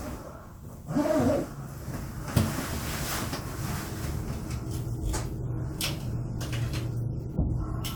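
A recording of everyday sounds, with nothing technically wrong with it.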